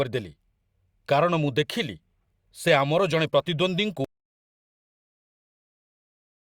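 It's a speech clip, and at about 4.05 s it hits an audio dropout to silence: dead silence, no room tone, right through to the end, likely from the input getting disconnected or muted.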